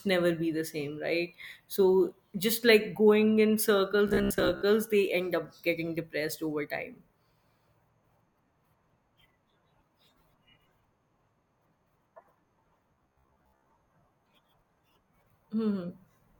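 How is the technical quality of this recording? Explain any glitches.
Two glitches stand out, both robotic sound from repeated short buffers. From 4.08 to 4.62 s, between "just like going in" and "they end up getting", and again from 12.94 to 13.71 s, the speech turns into a rigid, metallic buzz at 66.8 Hz. The likely cause is audio arriving too seldom, so a chunk of about 15 ms is looped while the real audio is skipped. This affects roughly half of the first stretch and most of the second. The waveform shows identical repeating cycles, and a spectrogram shows flat, evenly spaced harmonic stripes.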